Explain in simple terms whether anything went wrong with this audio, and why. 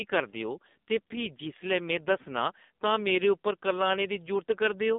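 AMR narrowband mobile codec, throughout the clip, from start to finish: the speech has passed through the low-quality setting of an old mobile-phone voice codec. It keeps only the band a phone line carries, from about 200 Hz up to 3.7 kHz, so everything higher is gone and the voice sounds thin and muffled. With so little data to rebuild each short slice of sound, the codec's simplified model of the voice leaves it heavily damaged, buzzy and synthetic.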